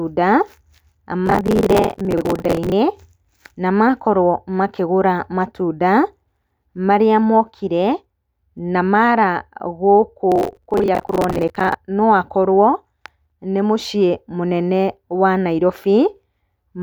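From 1.26 to 2.72 s and again from 10.32 to 11.74 s, processor overload crackle tears through the speech: dozens of buffers of around 10 ms miss their deadlines again and again and replay stale audio with hard edges. The dense, gritty burst that stops cleanly sets it apart from a single isolated dropout click.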